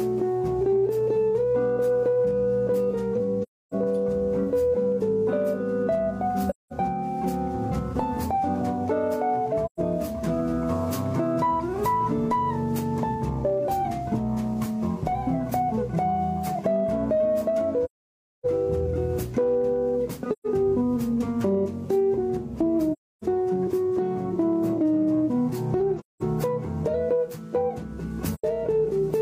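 AAC frame loss with muting shows up eight times, at 3.42, 6.50, 9.65, 17.84, 20.32, 22.92, 25.99 and 28.34 s. The decoder zeroed the lost frames, so the sound fades out and back into soft-edged gaps lasting 85 to 600 ms. The longest gap is at 17.84 s.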